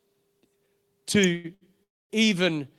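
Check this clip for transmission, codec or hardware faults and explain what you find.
There are three kinds of fault here, all packed into the middle of the speech.

At 1.24 s there's an electrical switching spike, a sharp snap sitting on top of the speech. It's likely a nearby switch or static discharge arcing briefly, with the audio line picking up that burst.

Two short stalls from late packets follow, at 1.35 to 1.46 s and 1.54 to 1.63 s. Each time a packet showed up late, the buffer ran dry and the receiver held the last sound, about 87 ms and then 71 ms, before carrying on. You hear a smeared hold, but nothing is lost.

From 1.83 to 2.12 s there's a call audio freeze. The last sound is dragged out briefly and then drops to about 250 ms of silence, which points to packets likely stuck in transit and an emptied jitter buffer. When the audio resumes it picks up where it left off, so a gap of roughly a quarter second has been inserted rather than anything removed.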